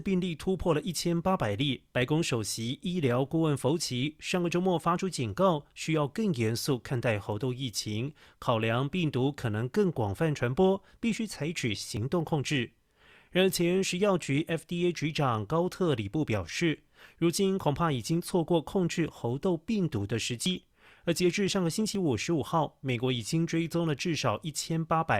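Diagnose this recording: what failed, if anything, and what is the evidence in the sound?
Likely dropped buffers (overrun) at the driver or buffer stage: capture fell behind and the hardware overwrote unread samples. The speech skips ahead with no silence at 11.97 s (about 20 ms lost), then at 20.46 s and 21.95 s (about 40 ms each).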